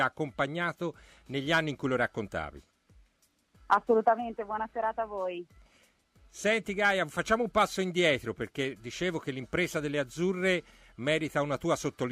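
No technical faults can be heard anywhere here.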